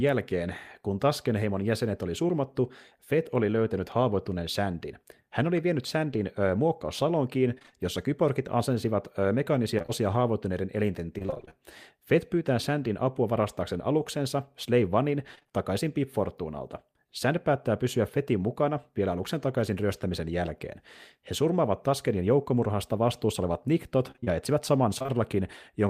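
At 2.27 to 2.31 s there is a short concealed packet loss. About 20 ms of the speech never arrived, which fits one lost 20 ms packet, and the decoder filled the hole by extending the preceding sound before fading back into the real signal. It is heard as a brief smear or wobble. On a spectrogram the harmonics run unnaturally flat and smooth for that instant. The waveform shows a short, too-regular repeating cycle where the detail is missing.

Repeated packet loss (robotic sound) occurs at 7.55 to 7.74 s, 9.78 to 9.90 s, 11.18 to 11.53 s and 15.35 to 15.51 s. In each stretch, gaps of about 20 ms recur so densely that roughly half the audio is patched, which makes it choppy. The last stretch, 24.11 to 25.10 s, has sparser gaps of up to 29 ms that cover about 15% of the span. A spectrogram shows a comb of repeated, frozen harmonic slices, and the waveform shows a chain of copied cycles with dips at the seams.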